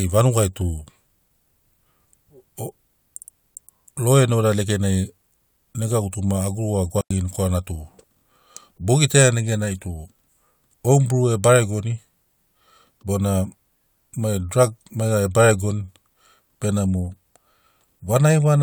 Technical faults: digital wireless dropout

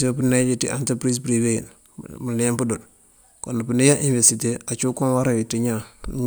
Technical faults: none

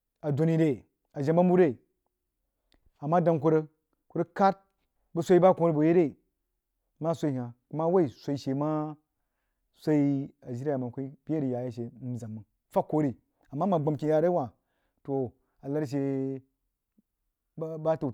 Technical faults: none

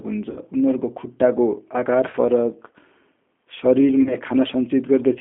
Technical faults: G.729 codec; VoIP packet loss concealed by the speech codec

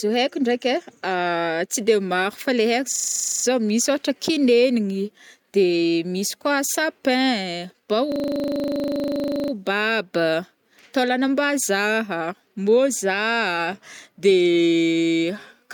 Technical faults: system hang loop

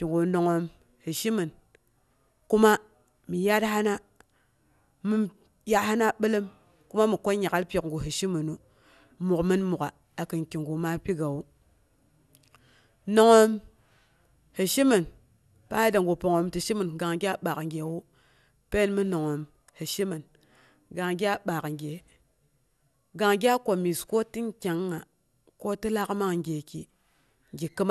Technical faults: generation loss

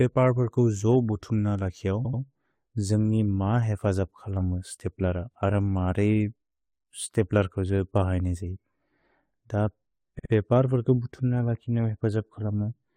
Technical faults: repeated frames

